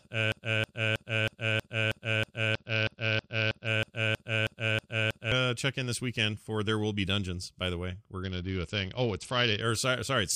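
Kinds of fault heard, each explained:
Broken-record loop: The speech is already stuck as the clip begins. A 0.32 s fragment repeats exactly, back to back, sixteen times until 5.32 s. The likely cause is a stalled player or stream resending its last fragment. The speech for that span is lost.
Bluetooth SBC bit pool drop: From 2.54 to 3.67 s and 8.23 to 9.61 s, the treble dulls and a gritty noise rises. The top sub-bands are starved and the rest coarsely quantised. This fits a congested link cutting the bit pool from 31 to 8, near 66 kbps.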